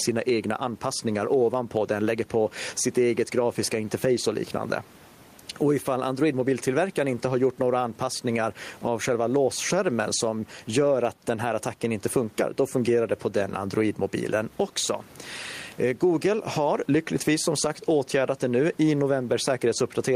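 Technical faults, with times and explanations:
Throughout, gain pumping: the room noise sits about 36 dB below the speech, and the level swings by around 10 dB. Loud and quiet passages are pressed close together, so the delivery sounds flattened and squashed. The likely cause is input gain set far too high for the microphone, with a fast limiter or compressor clamping down on each peak and releasing in the gaps.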